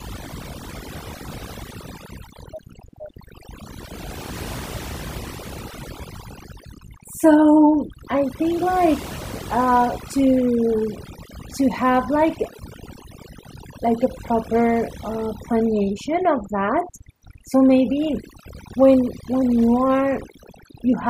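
From the start of the speech to the end, mains hum runs underneath. It is a steady low tone at 60 Hz, with some low harmonics above it. A ground loop or nearby transformer is leaking the power line into the signal. It sits well below the speech.

Overdone noise removal is also present for the whole clip. The processing was set too hard. It shuts narrow frequency bands down whenever they look like noise, and quiet parts of the speech vanish with them. The background in pauses drops and breaks up into twinkling specks.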